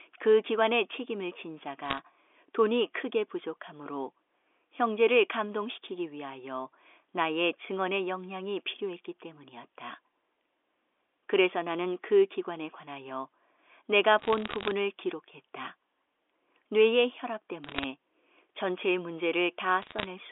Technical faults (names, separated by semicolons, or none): bit errors on a digital phone line